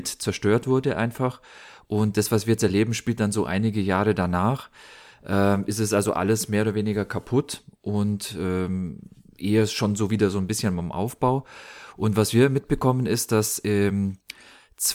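Listening through this speech recording, nothing technically wrong stood out.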